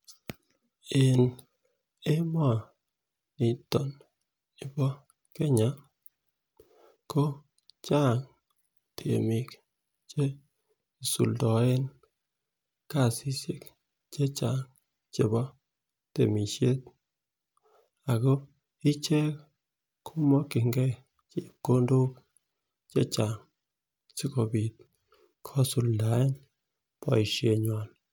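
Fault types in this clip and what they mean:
No technical faults can be heard anywhere in the speech; the signal stays continuous and steady throughout.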